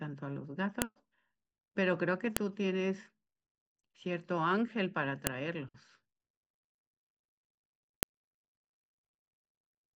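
At 0.82, 2.37, 5.27 and 8.03 s the speech is broken by a sharp, loud click: a file header played as audio, where joined WAV pieces kept their header bytes. On a waveform each is a lone spike; a spectrogram shows a thin full-height vertical line.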